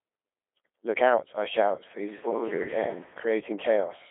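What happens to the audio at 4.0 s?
Codec 2 vocoder damage runs through the whole clip, including 4.0 s: the speech is rebuilt from sine waves using only pitch, voicing, energy and a coarse spectral envelope, which fits a rate around 2.4 kbit/s. That makes it robotic, buzzy and heavily smeared, with nothing above about 3.6 kHz.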